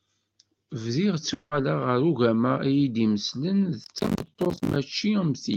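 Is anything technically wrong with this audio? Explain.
Yes, two faults. From 1.33 to 1.53 s, a likely long network dropout: audio stopped arriving, and about 180 ms was filled by a fading continuation before "ɣer ugama" resumes with that stretch missing. From 3.84 to 4.76 s, processor overload crackle: buffers around 10 ms long kept missing their deadlines, dozens of times over that stretch, each leaving a hard-edged silent gap, heard as gritty tearing over the speech.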